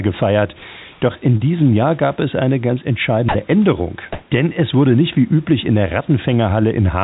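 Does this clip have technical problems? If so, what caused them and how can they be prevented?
Yes. Twice the room background turns into a flat, textureless hiss: from 0.92 to 1.01 s, with a level shift of about 1 dB, and from 4.13 to 4.31 s, where the level changes by about 12 dB. This is likely comfort noise in place of the background: discontinuous transmission stopped sending during pauses and the receiver synthesised stand-in noise. Disabling DTX on the sender prevents it.

At 1.37 to 1.43 s there is a brief smeared wobble, a short concealed packet loss. About 30 ms of audio arrived too late or not at all, and the decoder extended the preceding sound to bridge the gap before blending back. A larger jitter buffer or a more stable network prevents this.

Right after "gab es eine ganz", from 3.29 to 3.35 s, 60 ms of speech vanishes into steady noise. This is likely sound dropped by the voice detector: it mistook the speech for background and paused transmission. 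A less aggressive voice-activity threshold, or no DTX, prevents it. Throughout, the narrowband G.711 call path leaves nothing above 4 kHz.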